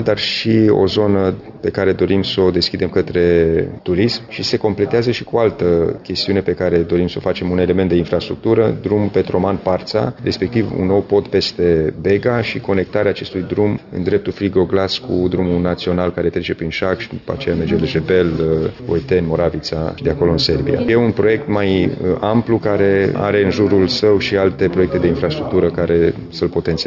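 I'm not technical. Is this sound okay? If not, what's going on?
Yes, nothing wrong can be heard anywhere in this audio.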